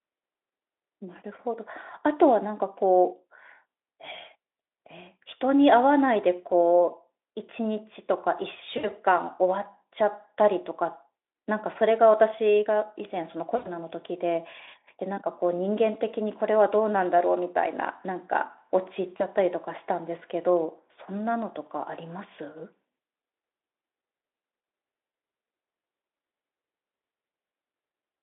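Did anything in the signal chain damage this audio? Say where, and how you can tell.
Yes. Network stage: VoIP packet loss concealed by the speech codec. At 8.77–8.91, 13.55–13.67 and 19.17–19.24 s, the decoder stretches sound into a fading buzzy tone or coloured noise.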